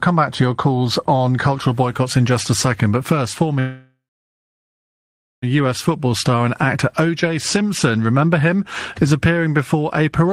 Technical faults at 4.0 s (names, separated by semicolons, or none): call audio freeze